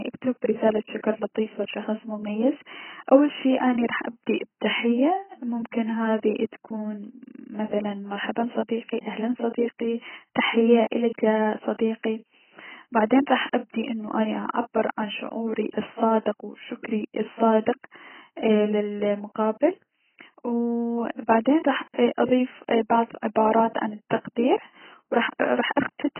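Throughout, the speech sounds dull and smeared, with nothing above 3.1 kHz and a warbling, fizzy texture; likely heavy AAC compression at a very low bitrate.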